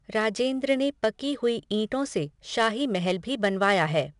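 Throughout the speech, 4-bit ADPCM compression leaves a gritty hiss on every loud syllable and roughens sharp onsets where the step size lags. Nothing sounds above 10.6 kHz. Unlike the swirling of MP3-style coding, this noise is broadband and follows the level, fading in pauses.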